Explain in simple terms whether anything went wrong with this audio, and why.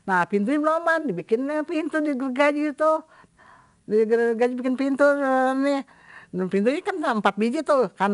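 The whole clip carries 4-bit ADPCM compression, which stores each tiny step coarsely. That adds gritty hiss to loud speech, and nothing above 10.6 kHz survives.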